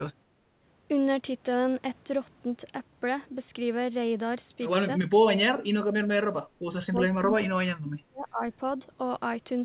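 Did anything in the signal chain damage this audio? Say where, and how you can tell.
Yes. From 0.31 to 0.59 s the room sound dips by about 8 dB, then recovers: background gated by the echo canceller, in call processing, clamping the microphone while the loudspeaker played.

From 5.46 to 6.36 s and 6.7 to 8.42 s the speech drops by up to roughly 40 dB. The likely cause is speech suppressed in double talk, with the echo canceller muting both talkers.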